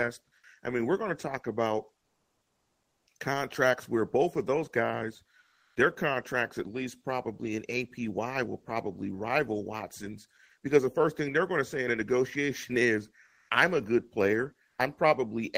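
In the speech pauses at 2.01 to 3.07, 5.39 to 5.75, 13.25 to 13.49 and 14.67 to 14.77 s, the real background turns into flat, featureless hiss: comfort noise in place of the background, likely from Opus DTX muting the sender between phrases. Levels shift only slightly, about 4 dB quieter in the second gap.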